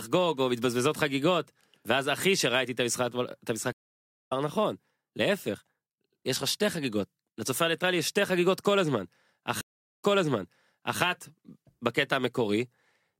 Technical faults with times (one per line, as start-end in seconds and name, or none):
0.00-13.20 sample clock jitter
3.72-4.32 stream reconnect
9.61-11.00 stream reconnect